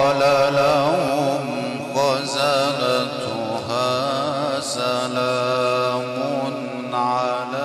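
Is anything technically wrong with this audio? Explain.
Yes. From 1.08 to 1.10 s there is loose connector crackle. A worn contact briefly makes and breaks, chopping the signal into a short, irregular scratchy burst.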